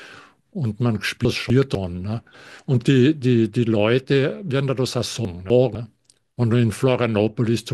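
Chunks out of order at 1.25–1.75 s and again at 5.25–5.75 s: one 250 ms chunk arrives late and swaps places with the next, jumbling the speech.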